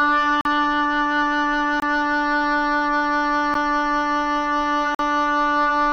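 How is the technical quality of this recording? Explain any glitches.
The recording has four blocks of digital silence, at 0.41 to 0.45 s (about 43 ms), 1.80 to 1.82 s (23 ms, fitting a 1024-sample buffer), 3.54 s (12 ms, fitting 512 samples) and 4.95 to 4.99 s (46 ms, fitting 2048 samples). Each time, the output buffer was not filled in time and was sent as zeros. The sound drops abruptly to dead silence and returns with no fade, so the 12 ms gap reads as a tick and the longer ones as short holes. Unlike a concealed packet loss or a fade, nothing is smoothed or filled in.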